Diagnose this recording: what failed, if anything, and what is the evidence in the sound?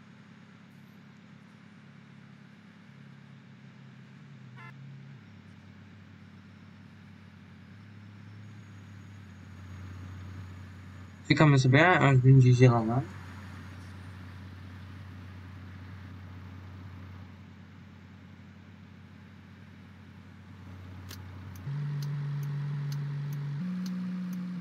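Nothing in the chain seems to have failed here, and there's no point in the audio where any stage, from wiring through to playback, leaves a mark worth diagnosing.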